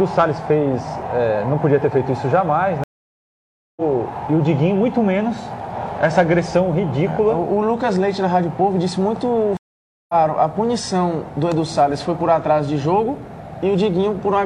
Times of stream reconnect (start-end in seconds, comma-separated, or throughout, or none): 2.84-3.82, 9.57-10.14